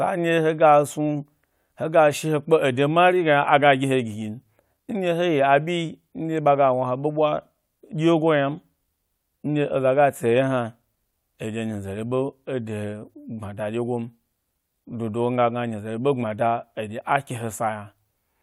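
Speech recording, with no technical faults audible anywhere.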